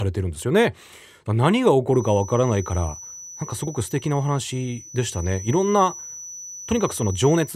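A speaker-to-microphone loop, likely sitting at the edge of feedback, leaves a feedback whistle from 1.86 s on: a thin 5.9 kHz tone roughly 20 dB under the speech, slowly swelling and fading.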